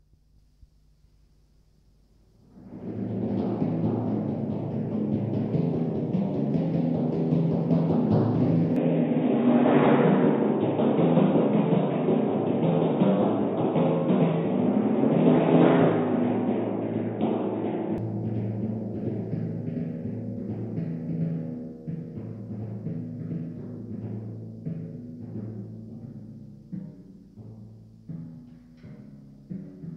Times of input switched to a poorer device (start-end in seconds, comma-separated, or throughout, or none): 8.76-17.98